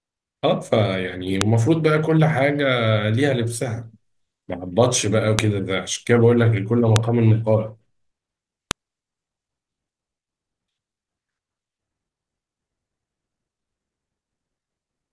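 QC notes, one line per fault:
1.41, 5.39, 6.96 and 8.71 s: file header played as audio. Separate WAV pieces were joined without stripping their headers, so each piece's few dozen header bytes were decoded as sample values instead of being skipped. Those bytes bear no relation to the speech waveform, so each one produces a sharp, loud click or snap lasting only a millisecond or so, landing at the start of each new piece regardless of what the speech is doing.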